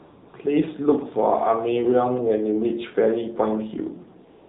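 A speech clip passed through the AMR narrowband mobile codec, AMR-NB, from start to finish. Nothing above 4 kHz survives, so the sound is thin and boxy. The codec damage is plainly audible. Each 20 ms frame rebuilds the voice from a vocal-tract model fed by a few pulses. At this low rate that gives a buzzy, synthetic edge. The degree of damage fits a low mode around 7.4 kbps. AMR comfort noise appears twice. The first stretch runs from 0 to 0.34 s, and the second from 4.30 s to the end. In both, no speech frames arrive. The receiver fills the gap with smooth synthetic noise built from a rough level and spectrum. The real background is replaced, and the noise switches in and out at those boundaries.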